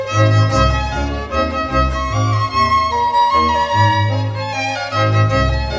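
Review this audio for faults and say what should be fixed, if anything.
Nothing to fix; the clip presents no audible faults.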